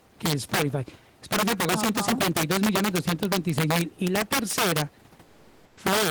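Throughout, an integer overflow lets loud peaks, driven about 7 dB past the limit, wrap to the opposite sign instead of clipping, so a small share of samples snap into violent, sharp cracks on the speech. From 5.25 to 5.77 s, just after "la tercera", the sender likely stopped transmitting during the pause (discontinuous transmission, as in Opus DTX), so comfort noise stands in for the background. The room noise, about 31 dB below the speech, becomes a steady, featureless hiss for those 520 ms, barely shifting in level, about 1 dB.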